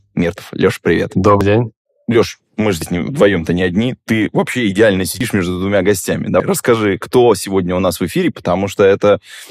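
At 1.41, 2.82 (after "мы же"), 5.21 (after "вообще идеально") and 6.4 s (before "расскажи кто сегодня у"), the speech skips ahead with no gap, dropping roughly 40 to 150 ms each time. This is likely a dropped buffer (overrun), with unread samples overwritten before capture.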